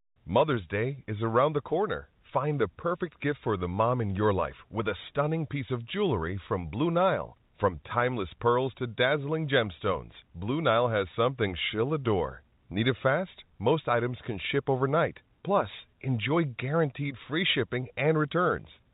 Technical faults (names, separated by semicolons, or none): none